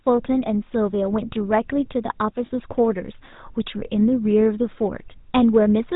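GSM full-rate codec damage runs through the whole clip. The speech has been squeezed through a vocal-tract model driven by a sparse train of regularly spaced pulses, so only a coarse version of the excitation survives. The result is a buzzy, gravelly roughness on every voiced sound, plainly audible throughout, and nothing above 4 kHz comes through, which leaves sibilants dull. The overall character fits the 13 kbps full-rate coding.

Lost GSM frames strike from 2.46 to 2.51 s, a gap that fits two consecutive 20 ms frames going missing. The decoder filled the hole by reusing the parameters of the last good frame rather than producing new sound. That substitution is heard as a brief, rough, metallic ring that hangs on the preceding sound. Because the loss is so short, the ring does not fade to silence before normal decoding resumes.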